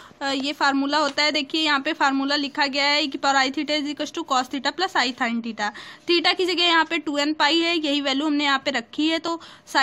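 At 9.28 s the audio jumps with a brief skip, an overlap between stream segments. Two segments' time stamps collided, and trimming the supposed duplicate removed a few milliseconds of real sound; the stream uses 4-second segments. A waveform shows an abrupt discontinuity; a spectrogram shows a thin vertical broadband line.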